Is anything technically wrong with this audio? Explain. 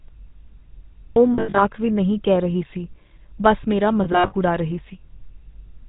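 Yes. The whole clip has GSM full-rate codec damage. Its buzzy, gravelly roughness comes from pulse-driven vocal-tract modelling, which fits 13 kbps coding. A spectrogram shows nothing above 4 kHz.

Lost GSM frames occur at 1.34–1.62 s, before "ਵੀ ਨਹੀਂ ਕਹਿ ਰਹੀ", and at 4.04–4.33 s, between "ਰਹੀ ਸੀ ਬੱਸ ਮੇਰਾ" and "ਉਡਾ ਰਹੀ". About 180 ms is lost in each, in short scattered runs. Repeated last-good parameters produce a metallic ring, seen as smeared bands.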